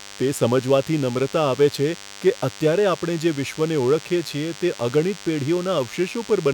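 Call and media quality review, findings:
DECT cordless phone buzz under the speech for the whole clip: thin 100 Hz buzz, harmonic-rich, roughly 20 dB down. Nearby handset or base bursting every 10 ms, rectified in the audio path.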